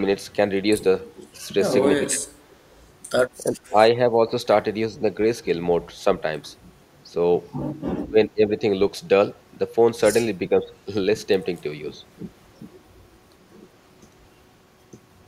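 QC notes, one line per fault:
1.21–1.26 s and 2.51–2.76 s, echo leak: a faint delayed copy of the speech trails the original by 386 ms, about 40 dB below it in the first burst and about 35 dB in the second. This is likely a far-end loudspeaker echo that the echo canceller failed to fully remove. On a spectrogram it shows as a dim repeat of the harmonic pattern shifted 386 ms later. On the waveform it is barely visible above the floor.
2.08–2.36 s, 3.52–4.35 s, 7.09–7.15 s, 8.04–8.61 s and 10.49–10.71 s, speech suppressed in double talk: the speech level ducks briefly, by about 20 dB at its deepest in the first, second and fourth spans, about 5 dB in the third and about 10 dB in the last. This likely happens because the echo canceller mistook overlapping talk for echo and turned everything down. The waveform envelope shows sudden notches, and the spectrogram shows energy fading in those spans.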